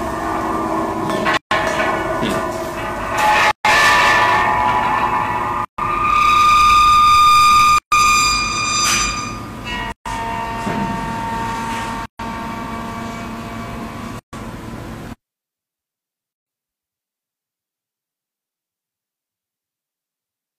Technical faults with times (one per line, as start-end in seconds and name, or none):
1.37-1.51 gap at a join of encoded pieces
3.51-3.65 gap at a join of encoded pieces
5.65-5.78 gap at a join of encoded pieces
7.78-7.92 gap at a join of encoded pieces
9.92-10.06 gap at a join of encoded pieces
12.06-12.19 gap at a join of encoded pieces
14.19-14.33 gap at a join of encoded pieces
16.33-16.46 gap at a join of encoded pieces